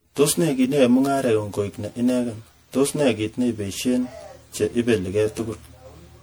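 A speech recording in which one channel runs roughly 10 ms behind the other before the two are summed to mono, producing channel delay (comb filtering): evenly spaced notches, the first near 40 Hz, leave the voice hollow and phasey throughout. The whole clip also sounds swirly, smeared and blurred at onsets, a pattern of generation loss that likely comes from about seven rounds of MP3 re-encoding at a rate that fits 96 kbit/s.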